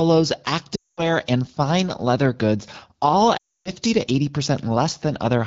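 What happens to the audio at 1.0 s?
At 1.0 s the speech is inside a run of lost AMR speech frames lasting from 0.75 to 1.10 s, roughly 220 ms, which fits about eleven consecutive 20 ms frames failing their checks. The AMR-WB decoder keeps repeating the last good pitch and vocal tract settings with shrinking gain, so the sound quickly drops to near silence within two frames before recovering weakly on "and fine leather goods". A plain dropout would instead cut to silence abruptly.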